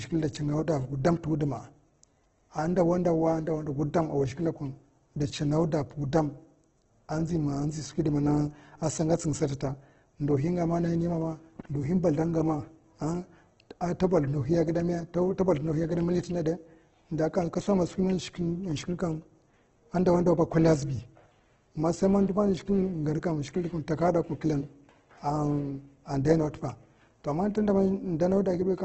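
Opus compression runs throughout this speech clip: nothing above 8.2 kHz, and heavily grainy, rough, noise-filled tones, likely from its music mode at a very low bitrate near 12 kbps.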